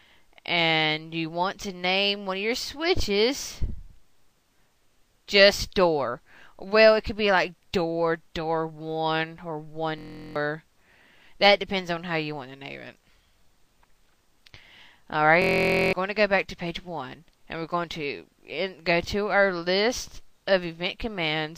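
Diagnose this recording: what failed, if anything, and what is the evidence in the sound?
The failure is in the driver or buffer stage: a system hang loop occurs twice. From 9.99 to 10.36 s, and again from 15.42 to 15.93 s, one 23.22 ms slice of sound repeats exactly, 16 and then 22 times. At 43.1 Hz, that short loop comes out as a steady buzz. The system froze while the hardware kept replaying its ring buffer, which fits a 1024-sample buffer. The stalls cost roughly 0.4 and 0.5 s of audio.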